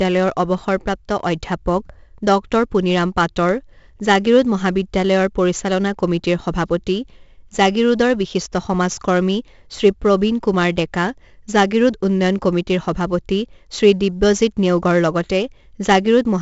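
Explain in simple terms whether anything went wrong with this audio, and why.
4-bit ADPCM compression damages the speech throughout. Each sample is squeezed into a tiny step, adding gritty hiss on loud parts. Nothing above 7.7 kHz survives, so it sounds dull.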